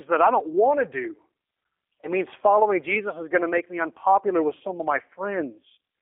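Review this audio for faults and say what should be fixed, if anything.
G.729 codec damage runs throughout: the speech is rebuilt from a vocal-tract filter and sparse pulses at 8 kbit/s, so it sounds rough and synthetic. A spectrogram shows a hard band from 300 Hz to 3.5 kHz. Prevent it by using a wideband codec such as G.722 or Opus.

VoIP packet loss concealed by the speech codec occurs at 2.01–2.11 s and 4.58–4.61 s. Each gap fits one lost 20 ms packet. The decoder repeats its last pitch and filter, which gives a fading buzzy tone or coloured noise that lingers afterward. The waveform shows smeared, decaying segments. Prevent it with jitter buffering and forward error correction or redundancy.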